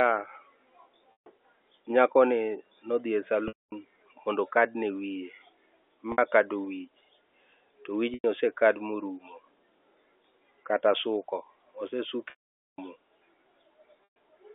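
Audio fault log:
1.12, 3.48, 6.12, 8.14, 12.3 and 14.04 s: packet loss with pitch repetition. Lost stretches of 60 to 480 ms are filled by a repeated pitch period. Short gaps buzz, and longer ones fade to silence.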